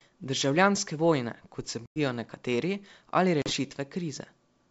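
At 1.86 s, after "vojne kot se", packet loss on an ADPCM call leaves a hard 100 ms silence, roughly a handful of packets. Speech returns slightly distorted until the decoder's predictor resyncs. At 3.42 s, a 40 ms gap recovers the same way.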